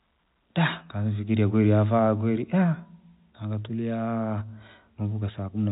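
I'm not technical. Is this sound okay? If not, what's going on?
Yes, nothing stood out as wrong when I listened to this recording.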